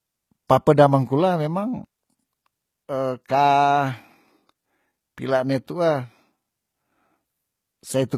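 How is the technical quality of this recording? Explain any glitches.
The recording has plainly audible codec damage throughout, plus one skip in the speech.

HE-AAC compression, throughout: the treble sounds gritty and metallic, with lispy s sounds. This is likely HE-AAC, where only the lower band is coded and the highs are rebuilt by copying lower bands upward, which fits a bitrate near 20 kbps. Plain low-bitrate AAC would sound dull rather than synthetic.

Audio missing between chunks, at 1.85 s: about 50 ms of speech vanishes, and the two sides butt together with no silence. The likely cause is a chunked recorder losing audio while switching buffers. Unlike a dropout, no gap or silence is heard, only a jump.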